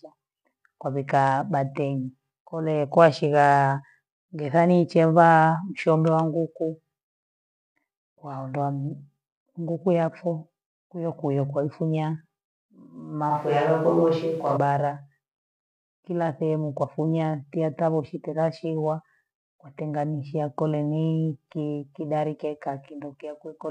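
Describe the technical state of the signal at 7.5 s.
At 7.5 s the speech signal is intact, with no fault audible at that moment.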